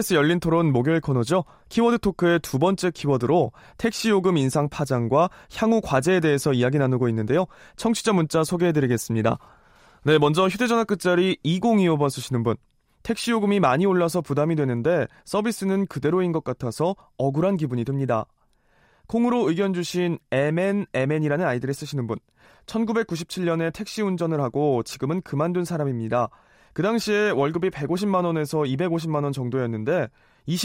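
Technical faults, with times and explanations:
No technical faults can be heard in this speech recording. At no point does the sound show a problem in how it was captured, processed or delivered.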